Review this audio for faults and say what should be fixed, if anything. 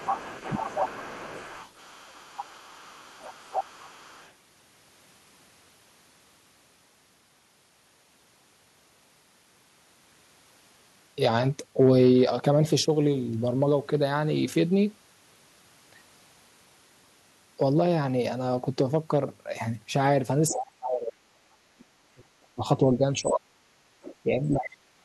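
The other side's voice leaking through runs from 0.0 to 4.33 s, about 15 dB under the speech, with brief scraps at 20.49–20.62, 23.33–23.38, 24.02–24.16 and 24.57–24.7 s, likely left behind by the echo canceller.

Speech suppressed in double talk appears at 0.54–1.23 s as a dip of about 15 dB, then as deep cuts of about 40 dB at 20.51–23.62 s and about 35 dB at 24.23–25.04 s. It's likely the canceller ducking both voices during overlap.

To fix it, use a headset or tune the echo canceller's double-talk detection so it doesn't leak echo or clamp the near talker.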